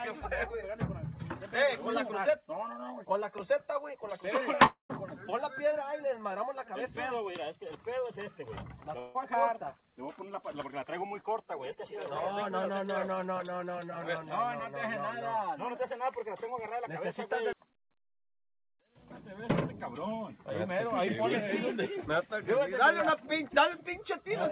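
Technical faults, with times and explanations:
4.66–4.91 s and 8.99–9.17 s, long network dropout: in each gap, audio stops arriving and is likely replaced by the receiver's concealment, which stretches the last sound into a fading buzz, then continues past the lost stretch. The first gap, about 0.24 s, ends in roughly 0.13 s of silence. The second, about 0.16 s, fades without going fully silent. A spectrogram shows smeared, repetitive bands decaying, in the first gap to a blank column, below the 4 kHz ceiling of this narrowband call audio. The waveform shows a shrinking envelope, then an abrupt resumption.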